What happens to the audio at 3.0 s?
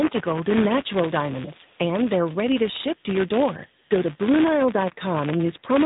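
At 3.0 s there is an echo leak, from 2.95 to 3.03 s. A delayed copy of earlier speech returns about 516 ms after it was first heard, sitting about 35 dB below the current speech. The likely cause is a far-end loudspeaker feeding a microphone whose echo canceller let a remnant through. On a spectrogram this appears as a weak duplicate of the harmonic pattern from half a second earlier, layered under the live speech for roughly 80 ms.

The same moment also carries buffer tearing, which runs through the whole clip. The writing and reading positions in a ring buffer have slipped past each other. Each period therefore contains a small slice of audio about 10 ms old, with hard joins on either side. The result is a robotic buzz at 172 Hz, which fits a 256-sample buffer. On the waveform the joins show as step discontinuities about every 5.8 ms. On a spectrogram they show as vertical striations repeating at that rate wherever there is signal.

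Finally, the AMR narrowband mobile codec is plainly audible here too, as everywhere in the clip. The buzz and synthetic quality fit the 10.2 kbps AMR-NB mode, which rebuilds speech from a vocal tract model and a sparse pulse excitation. Nothing above 3.8 kHz survives, so a spectrogram shows a hard ceiling with empty space above it.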